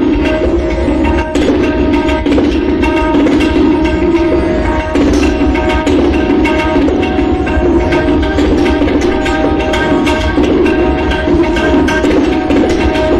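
Nothing goes wrong anywhere in the clip, so there are no technical faults to point to here.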